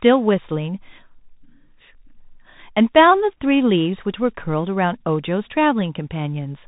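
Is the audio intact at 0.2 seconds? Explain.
No, at 0.2 seconds the speech is already going through a Bluetooth CVSD headset codec, and that runs for the whole clip. Each sample is squeezed to a single up-or-down bit with an adapting step size, which fits a 64 kbps stream. Nothing gets through above about 3.8 kHz, so it sounds narrow and boxy. The damage is plainly audible: a grainy hiss sits underneath, s sounds go scratchy, and loud high bits distort where the step can't keep up.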